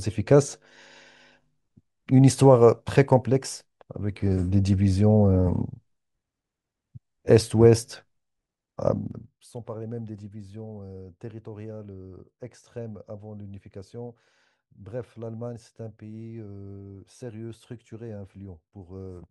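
From 8.96 to 9.49 s the speech drops by about 20 dB, and the drop arrives as zipper noise: the gain falls in 2 dB jumps, around twenty a second, with no smoothing between them. Each jump puts a small click into the waveform, so a fast, even ticking rides on the speech while the level falls.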